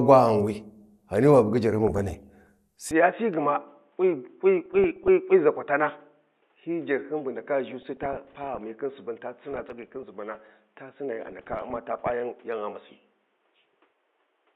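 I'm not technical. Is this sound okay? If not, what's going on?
No. The DAB radio signal was weak, so transmission errors slipped past the error correction and corrupted the audio data. This DAB burbling breaks into the speech just after "wa bugi jarhyin" at 1.82 to 2.49 s, then at 4.66 to 5.08, 7.82 to 8.64, 9.53 to 10.49 and 11.27 to 12.12 s.

From 2.91 s to the end, the recording likely switched its input to a poorer device, such as a different microphone or a headset. The voice turns duller and a bit quieter, loses everything above about 3.8 kHz, and gains a faint background noise. The change happens with no gap.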